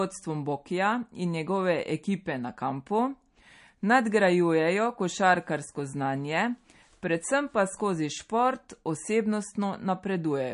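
Throughout, the speech sounds watery and swirly with nothing above 10.6 kHz, likely MP3 compression at a low bitrate around 40 kbps, zeroing weak frequency lines frame to frame.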